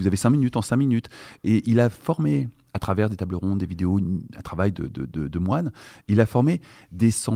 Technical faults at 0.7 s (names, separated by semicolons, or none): none